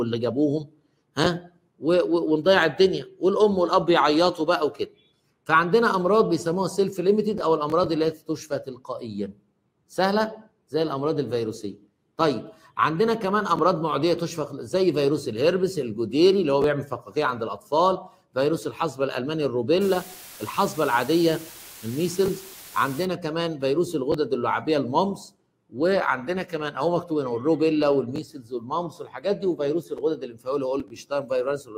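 From 19.81 to 23.05 s, the audio is reduced to very low bit depth with dither: each sample is rounded to very few levels, consistent with a word length of about 7 bits, and random dither is added before the rounding. Instead of producing grainy, signal-following distortion, the rounding error is spread into a steady white-noise floor. For those three seconds, an even, constant hiss sits only about 20 dB below the sound.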